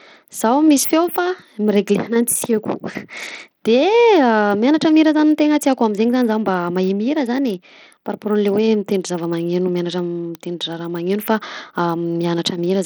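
Speech, with Bluetooth SBC compression damage plainly audible throughout. Treble flickers and drops out under gritty noise, likely from a low SBC bitrate near 80 kbps.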